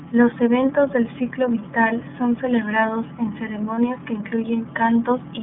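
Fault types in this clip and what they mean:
iLBC codec: The speech runs through a narrowband VoIP codec that holds a line band of roughly 150 Hz to 3.5 kHz, so the voice sounds clear but thin, with a plainly audible rough, slightly synthetic edge. The bitrate fits the 13.33 kbps mode with 30 ms frames, each coded on its own. On a spectrogram, energy stops in a flat ceiling near 3.5 kHz with nothing above 4 kHz, and the lowest band is trimmed away.
Lost iLBC frames: At 3.75 s, right after "vital son celebrados en", one 30 ms frame goes missing, and the decoder covers the hole by repeating the last pitch cycle blended with noise. It comes through as a brief held, faintly buzzy vowel before the voice snaps back almost at once. The waveform shows a short stretch of near-identical repeated periods, and the spectrogram shows steady, smeared harmonics lasting about 30 ms.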